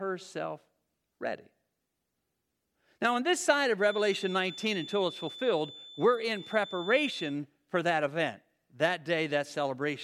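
From about 3.77 s to 7.38 s there's a feedback whistle sitting behind the speech, a thin steady tone at 3.5 kHz, roughly 15 dB down, swelling and fading slowly in level. Likely the speaker-to-mic loop was hovering right at the edge of feedback without tipping over.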